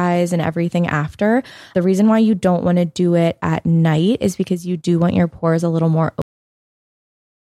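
At 6.22 s, just after "pores a little more", the speech is severed mid-sound: a cut-off end, with final buffers never played, dropping abruptly rather than decaying like a natural fade.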